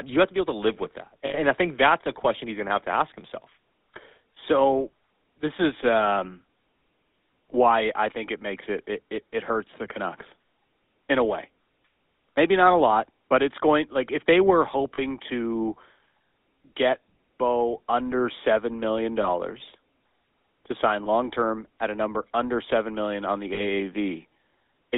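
Throughout, the GSM full-rate codec models the voice with regularly spaced pulses inside a band of roughly 250 Hz to 3.7 kHz, which leaves a plainly buzzy, gravelly roughness.

Lost GSM frames occur at 1.26 s for about 80 ms, between "to live with that" and "and I think that's". They recur at 14.94 s (40 ms), at 19.22 s after "under seven million" (20 ms), at 21.04 s after "to sign" and before "long term at a" (20 ms), and at 23.54 s (40 ms). Each time the decoder repeats the last good frame, so the sound briefly holds as a rough, metallic ring.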